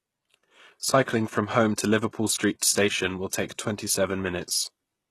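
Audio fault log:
Throughout: HE-AAC compression, likely the cause of the plainly audible damage in this speech. Nothing sounds above 12.3 kHz, yet the upper band stays bright rather than dull, because that treble is rebuilt from copied lower bands, which fits a low bitrate around 16 kbps. Its harmonics fail to line up with the coded lows, so s sounds come out gritty and metallic. A plain low-pass filter would instead sound muffled, with no synthetic sheen.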